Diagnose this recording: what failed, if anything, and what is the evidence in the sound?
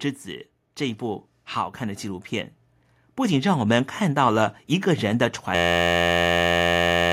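Two separate failures are audible. The first sits in call processing: automatic gain rising from 0.77 s to 2.6 s. The gain control judged the input too quiet and ramped its gain up by about 4 dB over nearly two seconds, so the speech and the background noise floor swell together. On a waveform the envelope widens steadily across that span. On a spectrogram the whole band, noise floor included, brightens gradually rather than at a single edge.

The second failure is at the driver or buffer stage: a system hang loop from 5.55 s to the end of the clip. The machine stalled while the audio hardware kept replaying the same ring buffer. An 11.61 ms fragment repeats exactly, which fits a 512-sample buffer, and it becomes a steady buzz at 86.1 Hz. About a second and a half of real audio is lost. The waveform shows an identical short cycle tiled end to end. The spectrogram shows rigid harmonic lines spaced at 86.1 Hz, with no speech movement.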